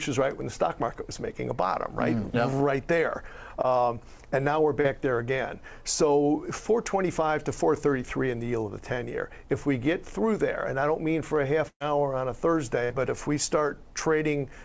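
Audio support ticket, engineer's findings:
Short concealed packet loss, 3.62–3.65 s: brief smear in the sound, about 20 ms missing, roughly 14 ms synthesised from the preceding signal before crossfading back. Jitter buffer / decoder concealment. Second instance at 4.81–4.86 s: about 40 ms lost, 31 ms filled, audible as a short wobble where the receiver extended the last sound rather than leave a hole.

Burst of packet loss, 11.68–11.82 s: about 120 ms missing. The receiver extends the last sound for 119 ms, fading it down, with about 60 ms of near-silence before playback resumes further on. Consecutive packets lost or late at the jitter buffer. Second burst at 12.84–12.92 s: about 60 ms lost, 53 ms concealed as a decaying continuation, then a jump forward in the audio.

Call path: nothing above 8 kHz, consistent with a wideband codec such as G.722 at 64 kbps.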